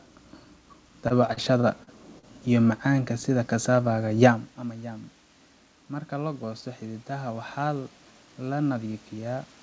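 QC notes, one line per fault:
1.08–2.25 s, repeated stalls (stutter): packets kept arriving late, so the jitter buffer ran dry six times and the receiver stretched the last sound to cover each wait, the longest 40 ms. About 172 ms is filled in and nothing is lost, but the sound drags and stutters.
5.89–9.53 s, automatic gain rising: after the input level fell by about 14 dB, as the talker had moved away from the microphone around 4.5 s, the gain control slowly raised its gain by about 5 dB. Voice and room noise swell upward together over several seconds.
7.61–8.28 s, jitter buffer speed-up: with too much audio queued, the receiver trimmed short pitch-period pieces in quick succession, cutting around 70 ms in total. Playback runs at 109% speed with unchanged pitch, so this stretch sounds hurried.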